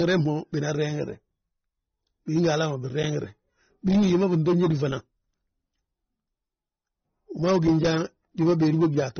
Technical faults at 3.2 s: transcoding between lossy codecs

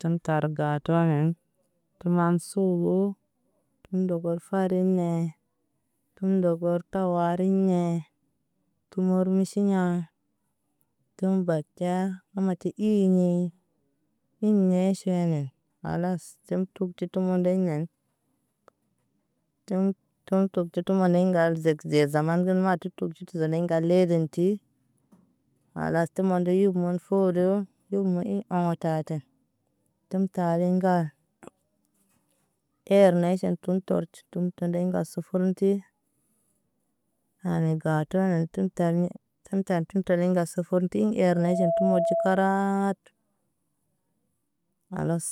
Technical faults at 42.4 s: loudspeaker feedback squeal

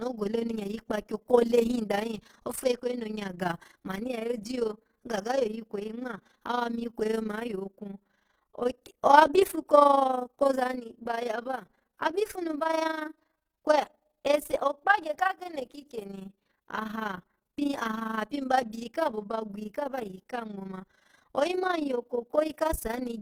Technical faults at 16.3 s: Opus compression; overlap-add ripple

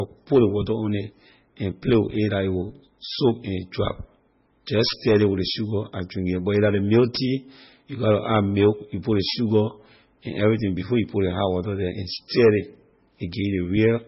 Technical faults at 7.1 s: MP3 compression

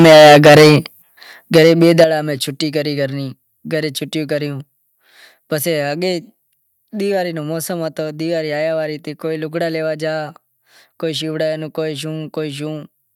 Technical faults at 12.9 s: none

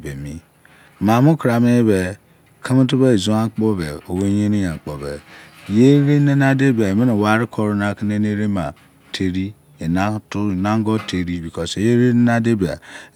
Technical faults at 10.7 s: none

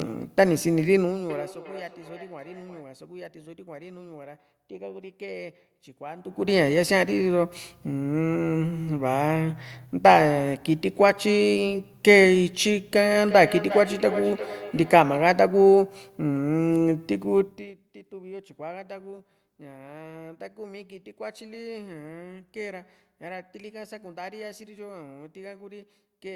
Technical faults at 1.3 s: feedback echo between two devices

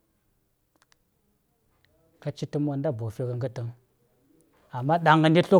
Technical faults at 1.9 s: none

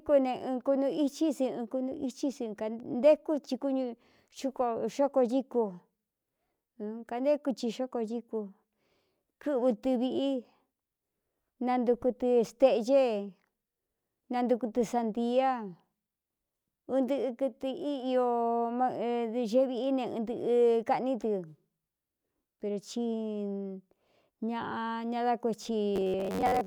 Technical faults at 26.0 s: robotic sound from repeated short buffers

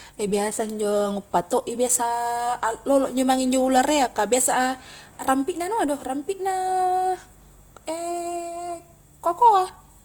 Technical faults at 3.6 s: Opus compression

